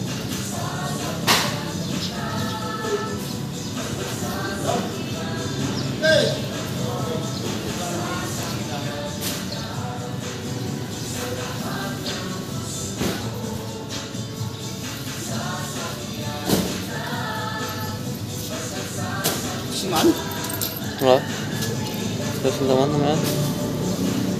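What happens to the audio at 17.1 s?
At 17.1 s the audio sits inside a run of periodic USB or driver dropouts lasting from 15.89 to 19.88 s. About once every second, something stalls the audio path and roughly a millisecond of signal is skipped outright, so the waveform jumps discontinuously. Each splice is heard as a regular tick, about five in all. On a spectrogram they appear as thin, evenly spaced vertical lines spanning the full frequency range.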